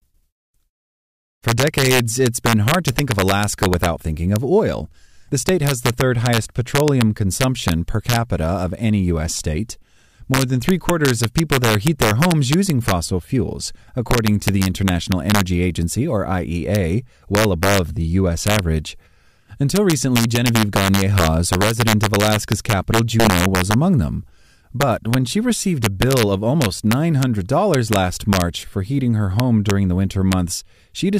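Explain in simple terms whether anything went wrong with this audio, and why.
Integer overflow runs through the whole speech clip. On the loudest moments, the level went past the largest number the system could store. Instead of stopping at the limit, it wrapped around to the opposite extreme. Only a tiny share of the sound is affected, so it comes out as sudden cracks on those peaks.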